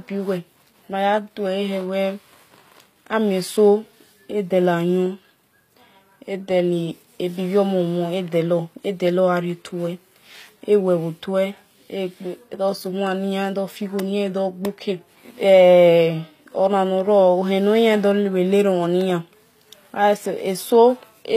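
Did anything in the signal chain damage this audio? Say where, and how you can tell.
Yes. HE-AAC compression, throughout: the treble sounds gritty and lispy with nothing above 15.5 kHz, likely from band-replicated highs at a low bitrate around 24 kbps.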